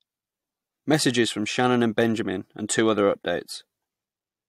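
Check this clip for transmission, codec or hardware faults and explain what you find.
No faults are audible anywhere in this speech recording.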